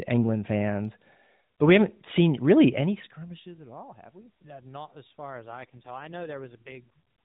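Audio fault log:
5.32–6.88 s, AMR rate drop: right after "we yeah not as", the speech turns rougher, buzzier and more synthetic, with no gap and no change of band. This fits the AMR-NB codec stepping down from 12.2 to 4.75 kbps and spending the freed bits on error protection over a weak radio link.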